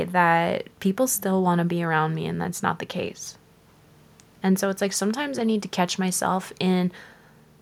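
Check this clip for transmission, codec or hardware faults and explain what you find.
Nothing audible in the speech points to a transmission, codec or hardware fault.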